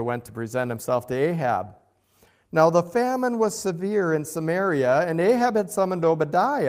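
No technical faults are audible in this speech.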